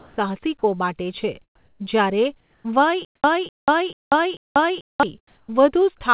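Speech, band-limited with nothing above 4 kHz, which fits a narrowband G.711 call path. Comfort noise replaces the background at 0.00–0.17 s, 1.55–1.79 s just after "માટે છે", 2.40–2.64 s and 5.27–5.48 s. The quiet background, about 40 to 47 dB below the loudest sound, turns into steady, featureless hiss. The level shifts by about 3 to 7 dB. The likely cause is discontinuous transmission, with the receiver synthesising noise during pauses. From 3.05 s to 5.03 s there is a stutter with silent gaps. A 250 ms fragment plays four times, each followed by 190 ms of digital silence, repeating every 440 ms. The audio that belonged there is lost, likely from a stalled stream replaying its last fragment at each retry.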